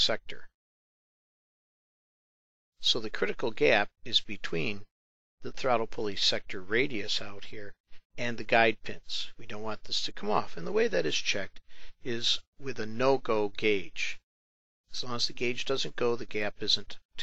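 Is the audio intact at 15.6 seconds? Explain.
No. Clock slip clicks run from 0.18 to 17.19 s: faint, evenly spaced ticks about every tenth of a second, likely from unsynchronised clocks roughly 200 ppm apart dropping or repeating single samples. Unlike dropouts, there are no audible gaps.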